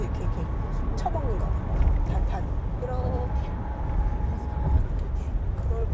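At 2.06 to 2.08 s a stretch of audio was dropped that had already been overtaken by later packets: a skip ahead. Roughly 0.4 s of sound is simply missing, with no fill, so the sound jumps forward and the two sides butt together almost directly.

From 3.65 to 5.38 s the jitter buffer held more audio than its target and shortened the backlog by repeatedly cutting tiny pitch-period-sized pieces, a jitter buffer speed-up. Playback runs at about 102% speed with unchanged pitch, dropping a few tens of milliseconds in all, heard through a call-codec band with nothing above 8 kHz.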